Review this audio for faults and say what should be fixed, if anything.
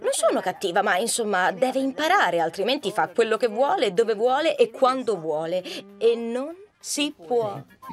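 Two devices in the chain are likely running on separate, unsynchronised clocks that differ by a few hundred parts per million, so a single sample is dropped or repeated each time the drift builds up to a whole sample. This produces clock slip clicks from 0.14 s to 7.89 s, a steady stream of faint ticks roughly every twentieth of a second that are clearest on louder passages. To prevent this, slave every device to one shared word clock or insert a sample-rate converter between the clock domains.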